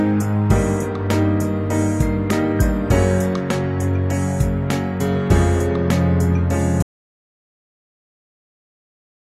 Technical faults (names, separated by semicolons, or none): audio dropout to silence